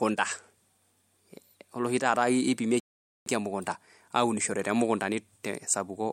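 At 2.80 s the speech halts in a rebuffering stall: playback ran dry and waited for more data, leaving silence until 3.26 s. Unlike a dropout, nothing is skipped. The speech resumes exactly where it stopped, with 0.46 s added.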